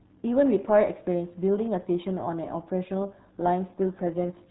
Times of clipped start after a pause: none

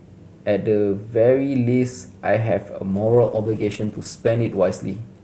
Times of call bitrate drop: 2.90-5.24

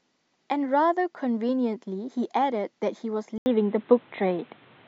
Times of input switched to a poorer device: 3.38-4.88

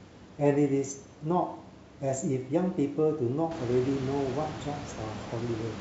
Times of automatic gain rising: none

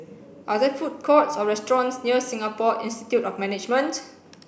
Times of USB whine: none

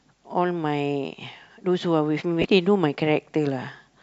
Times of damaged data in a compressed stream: 2.41-2.45

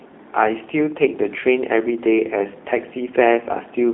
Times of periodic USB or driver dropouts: none

